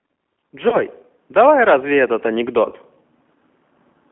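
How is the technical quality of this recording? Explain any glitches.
Technical quality is poor: the whole recording passes through a narrowband speech codec, and two short dropouts interrupt it.

G.729 codec, throughout: the speech is rebuilt from a vocal-tract model and sparse pulses at a rate that sounds like 8 kbit/s, confined to 200 Hz to 3.4 kHz, so it comes across thin, rough and plainly synthetic.

VoIP packet loss concealed by the speech codec, at 0.69 to 0.77 s and 2.69 to 2.74 s: each gap, which fits one lost 30 ms packet, is filled by extrapolating the previous frame. The speech smears into a brief buzzy tone or coloured noise that fades, and sounds weak as it recovers.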